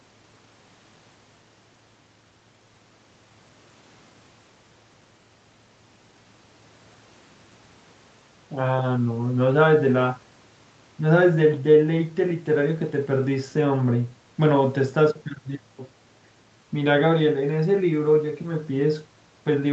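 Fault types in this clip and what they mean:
Nothing stood out on listening to this speech beyond the ordinary call sound, with content reaching up to about 8 kHz.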